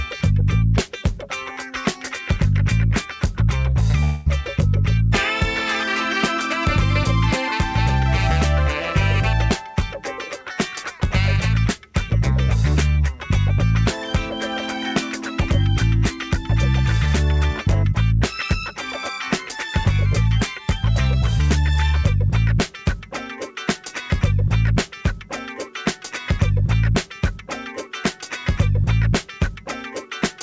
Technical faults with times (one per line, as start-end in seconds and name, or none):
4.04-4.28 long network dropout